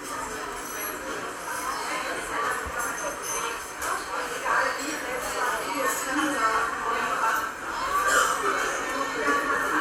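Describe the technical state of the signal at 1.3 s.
At 1.3 s the everyday sound plays through intact, with no dropout, distortion or other audible fault at that moment.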